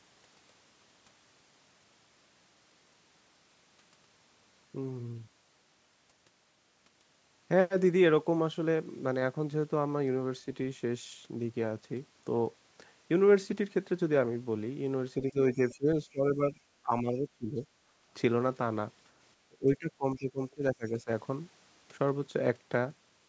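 Speech suppressed in double talk occurs from 15.18 to 16.59 s, 16.82 to 17.65 s and 19.48 to 21.09 s. In each stretch the speech sinks, dropping by about 15 dB, then about 20 dB, then about 25 dB. The likely cause is an echo canceller that, with both ends talking at once, could not tell this talker from the loudspeaker echo and turned both down.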